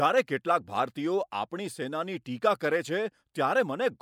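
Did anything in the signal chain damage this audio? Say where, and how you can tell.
No, nothing in the signal chain stood out as damaging this recording when I listened to it.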